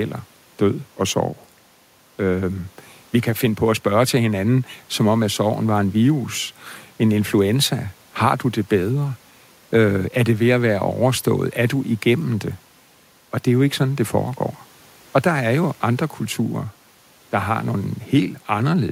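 No technical faults are audible anywhere in this speech recording.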